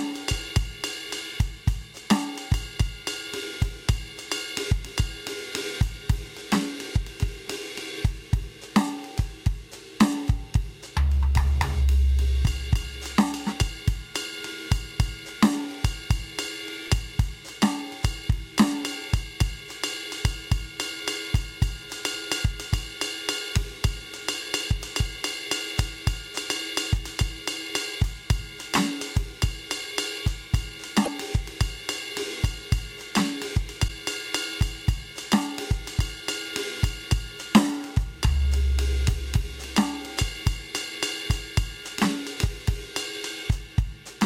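Music with two bursts of damaged data in the compressed stream, at 31.02–31.08 s and 33.84–33.90 s, heard as brief glitches where the decoder misreads corrupted frames and resynchronises.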